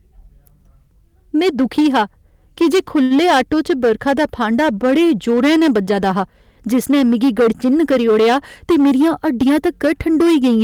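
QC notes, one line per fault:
throughout: hard clipping. The speech is driven about 10 dB past what the stage can pass, so the loudest tenth or so of the waveform is sliced flat. Those squared peaks add high harmonics, heard as a harsh fuzz riding on every loud syllable.
3.03 to 3.12 s: short stall from a late packet, just after "दुखी हा की जे". A packet arrived late and the jitter buffer ran dry, so the last sound was held for about 70 ms until it came. Nothing is lost, but the sound hangs slightly with a faint buzz or dip.
8.64 to 9.67 s: jitter buffer speed-up. The buffer had built up excess delay, so the receiver cut short pitch-period pieces repeatedly, around a tenth of a second in all. Speech runs at about 108% speed with pitch unchanged, sounding briefly hurried.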